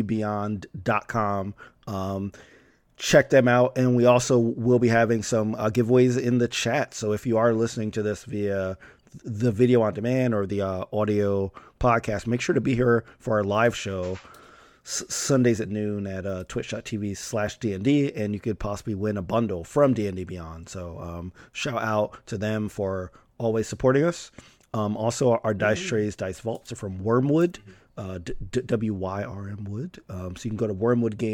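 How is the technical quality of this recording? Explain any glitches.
Nothing here needs explaining: I can't hear any glitches anywhere in the recording.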